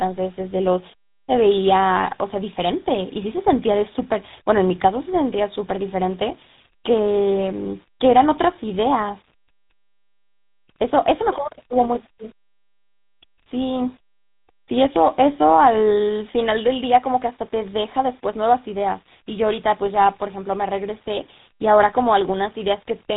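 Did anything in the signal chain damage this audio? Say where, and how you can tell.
Yes, two faults run through the whole clip.

A DC offset is present from start to finish. The waveform sits shifted off the zero line by a constant amount, which points to the converter or the analogue stage before it. It can't be heard as a sound. It shows as steady energy at 0 Hz at the very bottom of the spectrum and uses up headroom on one side. That sets it apart from mains hum, which would be an audible tone near 50 or 60 Hz with harmonics, not a fixed shift.

Tandem speech coding affects the entire recording, at the call-processing and codec stage. The speech is rough, muffled and warbly, and nothing reaches above 3.8 kHz. The texture suggests two speech codecs in a row, ending in something like GSM full rate at 13 kbit/s, with a G.711 mu-law leg in the path. Each coder re-encodes the previous one's degraded output, so the artefacts stack up. 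The damage is heavier than a single GSM pass would leave, and the warble is more than plain band-limiting would cause.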